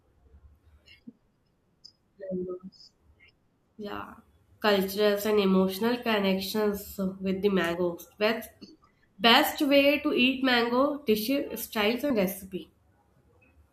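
Speech with compressed frames skipped at two points. At 7.74 s the audio jumps forward by roughly 50 ms, consistent with about two lost frames, and at 12.10 s by roughly 30 ms, about one frame. Each jump fits a 26.1 ms frame length, which points to frames missing from the stream or rejected by the decoder as damaged.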